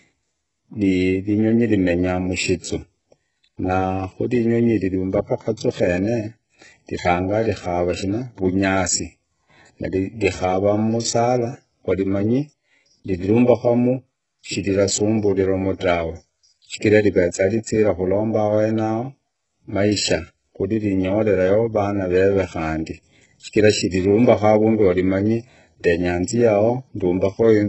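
Throughout, heavy HE-AAC compression is the likely cause of gritty, lispy s sounds. A spectrogram shows smeared, copied-looking treble bands with nothing above 8 kHz.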